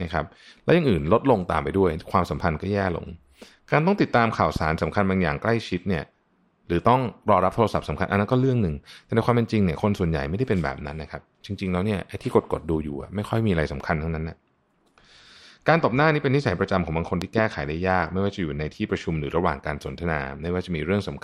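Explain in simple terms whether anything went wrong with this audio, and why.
A sudden electrical jolt, likely from a plug, switch or static, caused a loud pop at 4.56–4.58 s and a double pop at 17.22–17.40 s.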